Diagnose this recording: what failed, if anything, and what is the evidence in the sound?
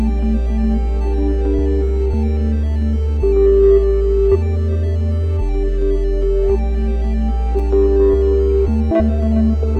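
Listening to the music, nothing stood out that would point to a failure at any stage of the chain.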